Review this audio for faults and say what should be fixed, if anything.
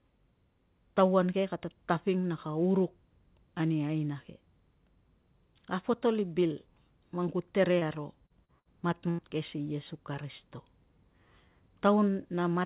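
Short concealed packet loss occurs three times. About 30 ms of the call arrived too late for the decoder at 7.79 s (right after "i bil man ku"), 8.26 s and 8.45 s. Each time the receiver patched the hole by extending the preceding sound and then blending back into real audio, so the speech smears or wobbles briefly, and at 8.45 s a few milliseconds of the original are dropped outright. Prevention: run the call over a less congested network path or give the jitter buffer more headroom.

A burst of packet loss hits twice, from 8.60 to 8.68 s (about 60 ms lost) and from 9.10 to 9.21 s (about 90 ms lost), the second just before "ke si iesu karisito". Consecutive packets never arrived in time, so the receiver carried the last sound forward and faded it, and voiced sound becomes a held buzz that decays before speech resumes with the in-between portion gone. Adding forward error correction or redundant packets on the link would prevent it. 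The narrowband sound, with nothing above 4 kHz, fits a G.711-style call codec.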